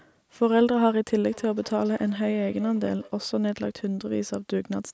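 From 1.28 to 3.19 s there is feedback echo between two devices. A second device in the room replays this speech and the original microphone catches it again. Each syllable returns about a fifth of a second later, thin and ringing, at about -23 dB.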